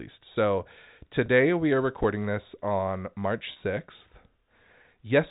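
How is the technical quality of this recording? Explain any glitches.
The speech comes through narrowband, consistent with G.711 telephone coding, and has three brief glitches from two kinds of transmission fault.

Packet loss with pitch repetition occurs at 1.26 to 1.28 s, just before "we are", and at 3.52 to 3.56 s. About 20 ms and 40 ms of audio went missing, which fits one and two lost packets. The receiver filled each gap by repeating the last pitch period, so each sounds like a briefly held, slightly buzzy tone.

An underrun with held sample occurs at 2.03 s, between "we are" and "this on". The output buffer ran dry, and the converter held its last value for about 5 ms. The waveform flattens momentarily. About 5 ms of live audio were dropped before the sound resumed.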